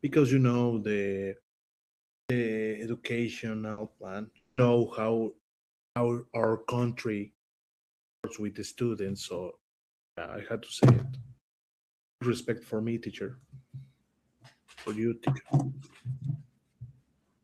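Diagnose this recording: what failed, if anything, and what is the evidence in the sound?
Playback device: clipped start after a pause at 2.12, 5.80, 8.07, 9.99 and 12.02 s. After 0.5 to 0.8 s silences, the output wakes late and swallows 160 to 190 ms of onset.

Network: a burst of packet loss at 3.71 to 3.79 s. The receiver extends the last sound for 60 ms, turning it down, then resumes with that stretch missing.

Network and codec: lost packets rebuilt from error correction at 3.77, 4.57 and 4.61 s. Each 20 ms frame is played from a low-bitrate copy and sounds rougher and noisier, but leaves no gap.

Network: at 4.37 to 4.59 s, 200 ms of concealment fades into about 30 ms of silence before the sound returns with that portion gone, likely a long network dropout.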